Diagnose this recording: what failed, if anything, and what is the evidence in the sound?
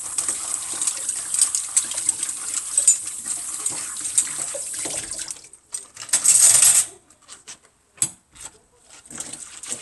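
Nothing here points to a failure at any stage of the chain, so there's nothing to diagnose in these sounds.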